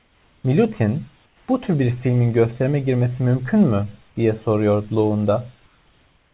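From 1.26 to 1.48 s, the sender likely stopped transmitting during a pause, and the receiver filled those 220 ms with comfort noise in place of the background. The real background, about 37 dB below the loudest speech, gives way to a flat, featureless hiss about 1 dB quieter.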